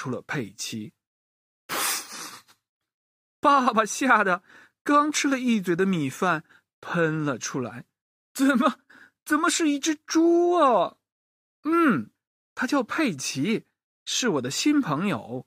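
No technical faults are audible anywhere in the speech recording.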